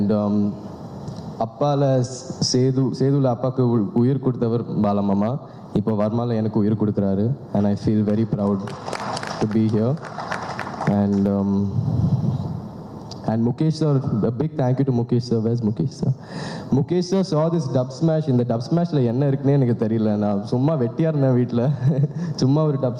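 Gain pumping runs through the whole clip, likely from gain set far too high feeding a fast limiter. The gain swings around 20 dB. The waveform shows flattened peaks, with the noise floor rising between them.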